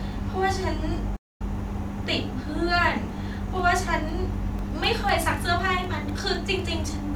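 At 1.16 s the player most likely ran short of data or had its thread blocked, producing a playback stall: the speech cuts out mid-flow for about 240 ms, until 1.42 s, then resumes where it halted.

From 2.84 s to 6.84 s, something blocks the USB bus or audio driver every 0.25 s, causing periodic USB or driver dropouts. Each loses roughly a millisecond, filled with silence, giving around fifteen evenly spaced ticks heard against the speech.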